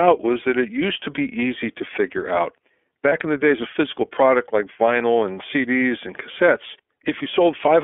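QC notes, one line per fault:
throughout: iLBC codec. The audio sits in a narrow telephone band, roughly 300 Hz to 3.4 kHz, with a plainly rough, slightly synthetic edge, which fits iLBC's 13.33 kbps, 30 ms frame mode.
3.09 to 3.13 s: lost iLBC frames. One 30 ms frame dropped, and the decoder filled it by repeating the last pitch cycle with noise, giving a brief buzzy held vowel before recovering immediately.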